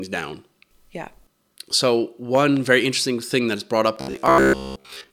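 At 2.35 s, just before "very interesting thing that", two loud pops land within about a quarter second, ending at 2.59 s. They peak about 10 dB above the speech, which carries on underneath. A voltage pulse, likely from a plug, switch or static, caused them.

From 4.01 s, right after "that is brought up", the voice turns robotic until 5.12 s. New audio likely arrived too seldom, so short buffers were repeated. Most of the sound is repeats. The result is a rigid, metallic buzz near 66.7 Hz, which fits a 15 ms buffer.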